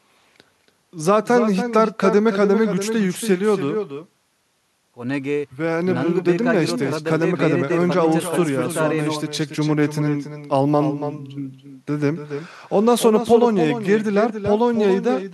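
Speech runs through the whole clip with an echo with no canceller. Every phrase returns roughly a third of a second later as a copy about 8 dB quieter and thinner, as if a far-end loudspeaker is feeding its microphone and nothing removes it. On a waveform each burst of speech is trailed by a smaller duplicate. On a spectrogram each syllable's harmonics reappear faintly just to the right, with less high end.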